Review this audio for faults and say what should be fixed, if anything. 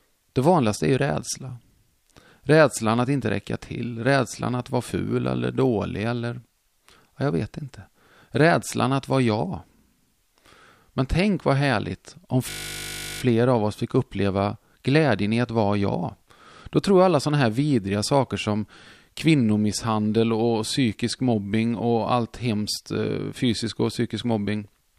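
A system hang loop runs from 12.5 to 13.22 s, between "tänk vad härligt om" and "av oss fick uppleva". One 20 ms buffer repeats 36 times, making a steady 50 Hz buzz. Little audio seems lost. Keep the driver and audio thread from stalling.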